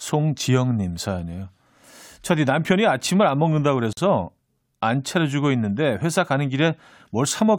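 Untrimmed encoder delay and padding between joined pieces leave a gap at a join of encoded pieces from 3.93 to 3.97 s: a 45 ms gap with smeared edges cutting into the speech.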